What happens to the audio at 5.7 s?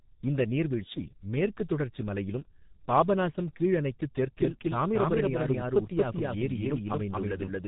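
At 5.7 s the audio is inside a doubled audio track that begins at 4.37 s and runs to the end: a second full-band copy trails the original by roughly 200 ms at about the same level, with no decay or room colour, likely from a second capture or out-of-step edit. Underneath, the whole clip carries heavy G.723.1 codec damage. Nothing above 3.8 kHz survives, and the coarse 30 ms frame coding, consistent with a bitrate near 6 kbit/s, leaves the speech muffled and hoarse with blurred consonants.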